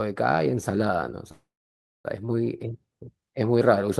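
From 1.31 to 2.06 s a call audio freeze holds the last sound as a fading buzz or hiss, then about 0.6 s of silence, likely from delayed packets. Speech resumes exactly where it stopped, unlike a dropout.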